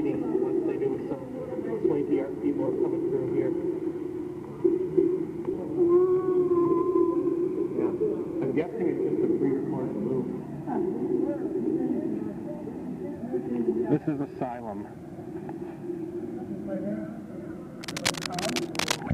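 At 5.53 s the sound jumps abruptly forward, with no gap or fill, and the material on either side is butted together almost directly. This is a skip ahead: about a second of audio was dropped, either lost in transit or discarded by an overflowing jitter buffer while later audio was already queued. Playback simply resumed from the newer material, so the listening delay shrank by roughly a second in one step.

From 5.65 s to 7.42 s the sound runs slightly fast, at about 107% speed, with its pitch unchanged, giving a faintly hurried, compressed feel to that stretch. This is jitter buffer speed-up: the receiver still held more audio than its target and trimmed short pitch-period-length pieces many times in succession. Altogether around 150 ms was removed across those 1.8 seconds to bring the delay back down.

From 17.83 s to 18.99 s a dense, irregular scratching and rustling lies over the audio, quite prominent at about 5 dB below the signal itself, and it lasts just over a second. 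This is cable scratch noise, likely from a worn cable, connector or control being moved. Its contact resistance fluctuated rapidly, injecting uneven bursts of noise into the signal path for as long as the movement continued.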